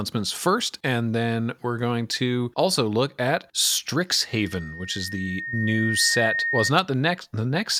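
A microphone picking up its own loudspeaker produces loudspeaker feedback squeal from 4.29 to 6.73 s: a 1.8 kHz tone swelling over about two seconds until it roughly matches the speech.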